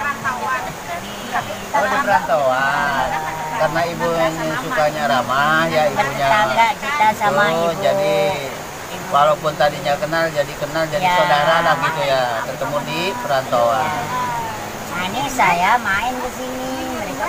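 No technical faults can be heard in this audio.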